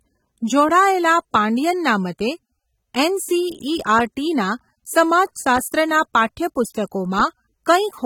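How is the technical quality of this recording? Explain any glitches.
The recording has one fault, present from start to finish: plainly audible AAC compression damage. The speech sounds dull and smeared. Sustained sounds warble, and sibilants turn fizzy. The likely cause is low-bitrate AAC-LC encoding, which fits a rate near 27 kbps. The coder splits the audio into frames of 1,024 frequency lines. It then quantises them coarsely against a hearing model, so fine detail is discarded. Nothing is present above 19.4 kHz.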